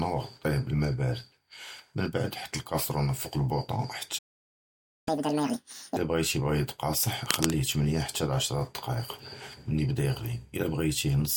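A speech recording with three faults. Playback stall, 4.18 to 5.08 s: the sound cuts out for about 0.88 s, most likely because the player ran out of data or its thread was blocked. Catch-up at higher speed, 5.08 to 5.97 s: the player resamples its backlog at 2x speed, raising the pitch roughly ten semitones, then returns to normal. Cable scratch noise, 7.26 to 7.53 s: dense, uneven scratching at roughly the level of the speech, likely from a worn cable, connector or control being moved.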